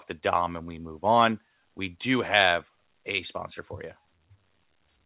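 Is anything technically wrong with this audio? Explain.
No, nothing stood out on listening to this speech, which comes through a G.711 A-law call path that carries nothing above 4 kHz, as that codec is designed to do.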